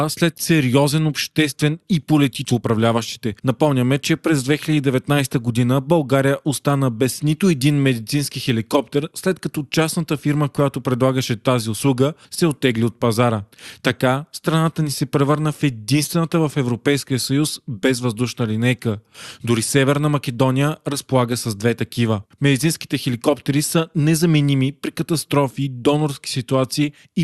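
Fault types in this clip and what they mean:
skip ahead: A stretch of speech is simply missing. Right after "след сериозен обществен и", at about 2.49 to 2.51 s, playback jumps forward with no filler. Roughly a second of audio is gone. Both sides of the cut are butted together almost directly. This happens when later audio is already queued and the buffer or network discards the earlier part. The delay drops by about that same second.
jitter buffer speed-up: The receiver had more audio queued than it wanted. It trimmed tiny pitch-period slices repeatedly to catch up. From 2.61 to 3.71 s the speech runs at about 110% speed, removing roughly a tenth of a second, ending just before "че през". From 4.48 to 5.05 s, just after "че през", it runs at about 108%, removing about 50 ms. Pitch stays the same. The delivery just sounds briefly hurried.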